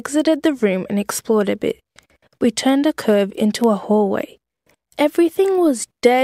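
A receiving device running on its own clock, unlocked from the sender's across a digital link, drifts by something like 40 parts per million, so this speech clip carries word clock ticks: sharp single-sample slips repeating roughly every half second, about ten in all, from 0.58 s to 6.19 s.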